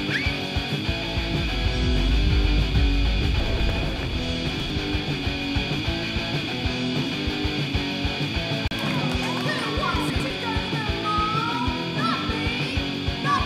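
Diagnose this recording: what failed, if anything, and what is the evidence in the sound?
Jumbled moments at 3.4–3.7 s, 4.5–4.7 s and 10.1–10.3 s: chunks out of order. 100 ms blocks arrived late in the buffer, one or two chunks behind, creating hard joins.

A brief 34 ms dropout to silence at 8.68 s is likely a Bluetooth stall: the playback buffer ran dry while delayed packets were resent.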